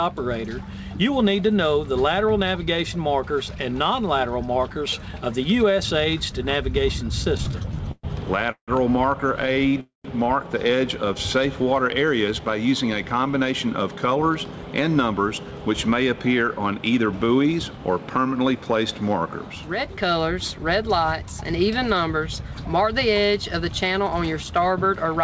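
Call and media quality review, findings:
Repeated stalls (stutter), 7.24–8.05 s and 9.42–9.76 s: jitter buffer underrunning in bursts, receiver concealing by continuing the last sound. First span has nine gaps (longest 119 ms), second five short ones (longest 15 ms). Waveform shows repeated, stretched-out cycles. Spectrogram shows smeared, horizontally streaked bands.

Call audio freeze, 8.51–8.70 s and 9.80–10.06 s: likely late packets draining the jitter buffer. Playback holds, then resumes where it stopped, with nothing lost. Concealed tail decays into near-silence, about 100 ms and 140 ms. Looks like fading buzz, then a flat waveform and a blank spectrogram column.

Jitter buffer speed-up, 12.28–15.59 s: buffer trimming excess delay by dropping pitch-period-sized slices. Audio runs about 8% fast, pitch unchanged, roughly a third of a second removed. Sounds hurried. Waveform is compressed in time, with spectrogram harmonics intact at unchanged spacing. 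Band ends at 8 kHz, which fits G.722.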